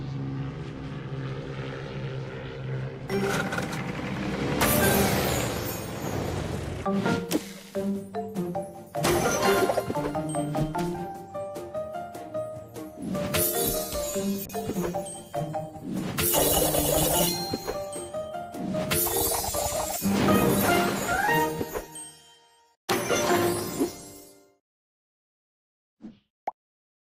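A call bitrate drop hits from 14.46 to 20.23 s: the audio turns rough and muffled, bottoming out for about 3.2 s, consistent with the encoder falling from around 64 to 18 kbps.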